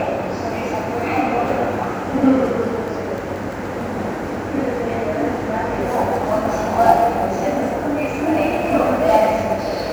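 A recording of sounds. From 5.81 s to the end at 9.93 s, sample clock jitter adds a hiss-like roughness. The converter's clock wanders by several microseconds, so samples land early or late. Steep, bright parts suffer most, with error about 30 dB below the sound.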